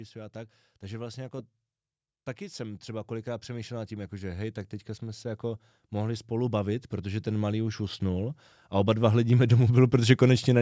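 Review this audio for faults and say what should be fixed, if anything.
From 2.56 s to 10.54 s the level climbs steadily, with the speech and the background noise swelling together by about 16 dB over roughly eight seconds. That is automatic gain rising: the gain control judged the input too quiet and kept raising its gain, so the noise floor comes up with the speech. The call microphone processing, with nothing above 8 kHz, is working as expected. To prevent it, set a correct input level and cap or disable the automatic gain.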